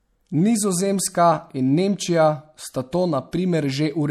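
A short speech recording with MP3 compression damage running through the whole clip. The damage is plainly audible. The s sounds turn watery and swirly, with a metallic edge. Consonant attacks are smeared. The likely cause is an MP3 encoder short of bits, which fits a low bitrate around 64 kbps. It zeroes weak frequency lines, which flicker on and off between frames.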